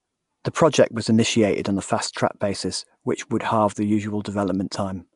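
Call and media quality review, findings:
Nellymoser compression, throughout: rough hissy halo, smeared underwater speech, nothing above 10.6 kHz. Likely Nellymoser Asao, starved bands noise-filled; consistent with about 44 kbps.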